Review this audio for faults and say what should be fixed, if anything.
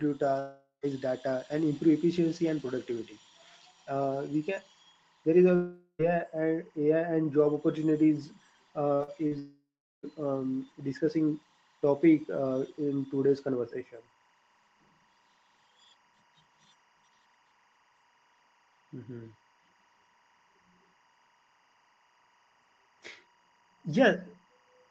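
Timecode bleed runs through the whole clip: a steady chirping warble sits behind the speech, about 40 dB down, flipping between tones near 1 kHz and 2 kHz. That two-pitch square-wave pattern is linear timecode leaking in from an adjacent track or cable, and its rate fits 23.976 fps code. It spans the full length, and the call path passes audio up to 8 kHz and so carries both tones through. To prevent it, route timecode on separate, shielded cabling and keep it off any track feeding the microphone chain.

Long network dropouts occur at 0.39–0.86 s, 5.55–6.02 s and 9.39–10.06 s, likely from packets not arriving for stretches of 0.44 s, 0.44 s and 0.64 s. Each time the receiver stretches the last sound into a fading buzz or hiss before going quiet, for about 0.13 s, 0.08 s and 0.39 s respectively. The speech then resumes with the missing part gone for good. To prevent this, stabilise the network link with a wired connection or less competing traffic on the path.

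Short concealed packet loss hits three times just before the last dropout: at 8.95–9.02 s, 9.03–9.10 s and 9.27–9.34 s, each losing 40 ms. The decoder covers each gap by extending the preceding sound, continuing its pitch or shaped noise, then blending back into the real signal. These repairs are heard as brief smears or wobbles, and a short consonant can drop out. To prevent it, fix the same network instability and allow forward error correction or a slightly deeper jitter buffer.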